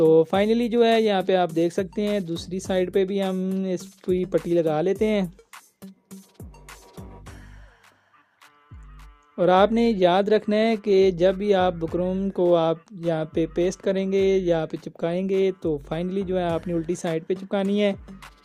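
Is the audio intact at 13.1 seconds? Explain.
Yes, at 13.1 seconds the audio plays through cleanly, with no dropout, click, distortion or other fault at that moment.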